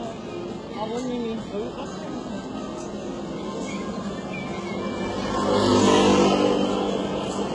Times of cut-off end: none

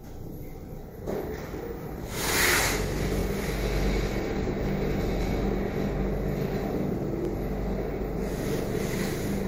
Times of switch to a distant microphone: none

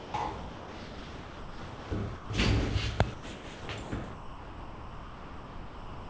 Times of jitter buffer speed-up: none

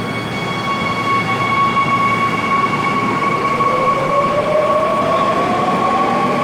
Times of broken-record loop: none

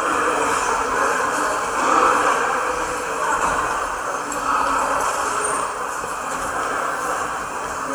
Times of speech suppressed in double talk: none

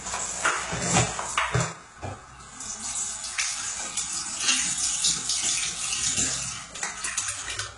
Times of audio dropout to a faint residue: none

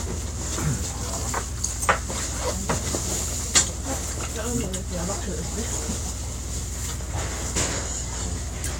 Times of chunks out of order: none

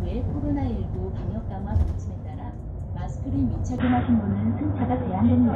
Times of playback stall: none

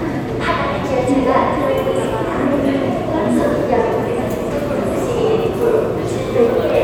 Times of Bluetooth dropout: none

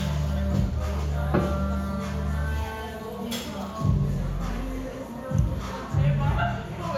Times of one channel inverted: none

